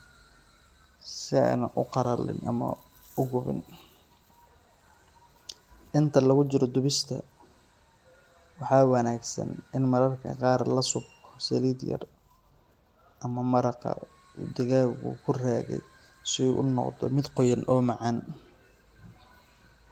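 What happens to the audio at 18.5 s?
At 18.5 s the speech carries on intact, with no dropout, glitch or other fault at that moment.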